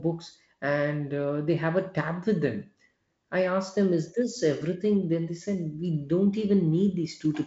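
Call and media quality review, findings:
Nothing to flag here; the speech comes through the G.722 wideband link at 48 kbit/s as expected for that coding, with the band stopping at about 7.7 kHz.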